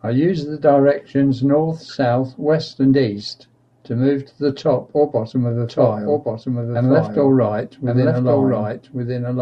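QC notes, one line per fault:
5.69 s to end: doubled audio track. A second full-band copy of the speech enters abruptly and runs about one second behind, roughly 5 dB quieter, likely from a slower capture path. Unlike an echo or reverb, it has no decay or room colouring.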